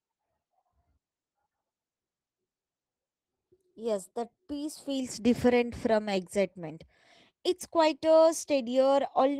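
It's a speech recording with plainly audible Opus voice compression the whole way through. The lower band sounds like SILK linear-prediction coding, with a CELT layer above 8 kHz keeping the top end present. The coarse excitation coding leaves the voice hoarse and a bit robotic, which fits a hybrid-mode stream running somewhere around 16 kbps in 20 ms frames, too few bits for speech at full bandwidth.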